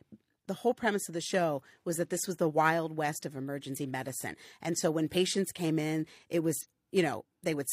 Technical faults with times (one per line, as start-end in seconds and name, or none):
1.13 corrupt frame decoded
3.72-3.77 compressed frames skipped
5.11-5.16 compressed frames skipped
6.60-6.66 compressed frames skipped